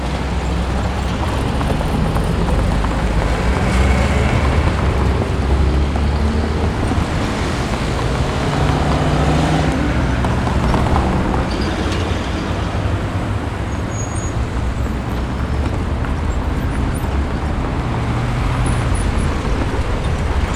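A recording of sounds with clicks roughly every 3.31 s from 0.63 s to 20.48 s, about seven in all. These are likely clock drift buffer slips, with a mismatch of about 50 ppm dropping or repeating a handful of samples. The strict regular spacing sets them apart from random dropouts.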